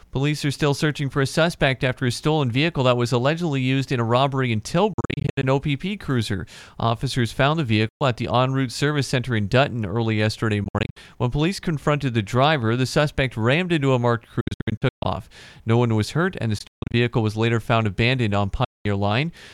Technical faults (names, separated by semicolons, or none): Bluetooth dropout